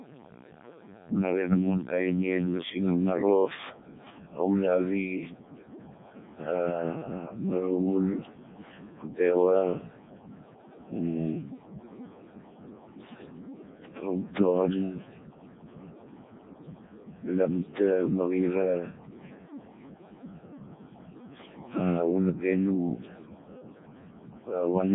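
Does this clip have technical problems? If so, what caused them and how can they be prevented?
Yes. The speech is processed by the Codec 2 vocoder throughout, with heavy damage: the decoder rebuilds the voice from sine waves using only pitch, voicing, energy and envelope data, producing robotic, buzzy speech with nothing above 3.8 kHz, which points to its lowest 0.7 kbit/s mode. Prevent this by using a waveform codec at an adequate bitrate wherever the link allows it.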